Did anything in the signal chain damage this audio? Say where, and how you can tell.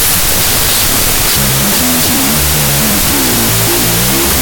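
Yes. The damage is a wrong sample width at the sample-format conversion stage, and it runs throughout. Loud noise buries the speech, which plays at half speed and an octave low. That fits 32-bit float data read as 16-bit integers, so each value splits into two mismatched halves.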